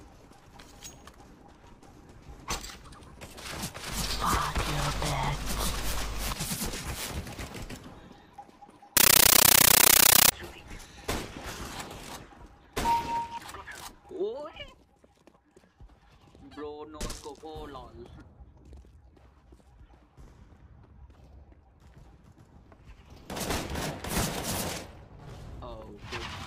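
From 8.97 to 10.32 s, loud chattering static with 13.3 ms noise bursts at 31.25 Hz replaces the sound: a compressed stream played as audio, consistent with undecoded AC-3.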